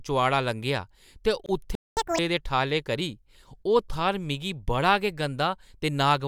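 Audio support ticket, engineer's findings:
Gap at a join of encoded pieces, 1.46 to 1.49 s right after "लंघेआ ते": a 26 ms dropout from untrimmed encoder delay and padding where separately encoded chunks meet, fits joins every 6 s.

Playback stall, 1.75 to 1.97 s: sound cuts out mid-flow for about 217 ms, likely the player running dry or its thread getting blocked, then resumes.

Catch-up at higher speed, 1.97 to 2.19 s, just before "दे ठालें करी": backlog resampled at 2x, so pitch jumps roughly ten semitones until it snaps back to normal.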